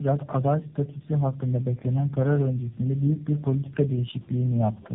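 From start to finish the speech carries tandem speech coding damage. It sounds like it has been squeezed through several speech codecs one after another, and the roughness and warble fit about four of them, probably with a low-rate coder at the end. Each stage re-encodes the previous stage's mistakes, so the errors stack. Nothing comes through above 3.7 kHz, which gives a muffled telephone band, and on top of that there's a gritty, wobbly texture.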